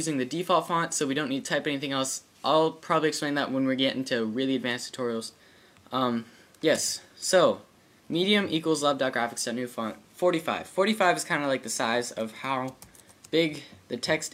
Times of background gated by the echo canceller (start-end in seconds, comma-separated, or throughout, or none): none